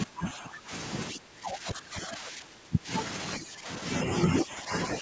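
Speech dips, by up to roughly 20 dB, at 0.05–0.72, 1.11–2.89, 3.39–3.68 and 4.27–4.71 s, likely speech suppressed in double talk by an echo canceller.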